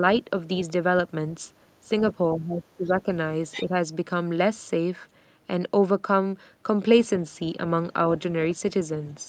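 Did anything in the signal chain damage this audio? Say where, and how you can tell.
Yes. Between 2.34 and 3.06 s the speech sinks sharply, at its deepest by roughly 25 dB, for most of that stretch, and at 3.66 to 3.73 s there is a brief, shallower dip of a few dB. This is speech suppressed in double talk, in the call processing. The dips most likely come from the echo canceller, which couldn't tell this talker apart from the loudspeaker echo while both sides spoke and turned the whole signal down.

At 3.52 to 3.63 s a brief scrap of a second voice comes through, about 10 dB below the main speech. This is the other side's voice leaking through, also in the call processing. The far end was playing on this device's loudspeaker and reached the microphone. Its likely cause is the echo canceller failing to remove all of that echo, so a short piece of it slipped into the sent signal.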